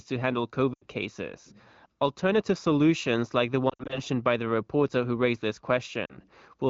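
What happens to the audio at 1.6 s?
Nothing goes wrong at 1.6 s: the speech there comes through intact, carried by the AMR wideband (HD Voice) codec at 15.85 kbit/s, a rate high enough that its coding leaves the sound clear.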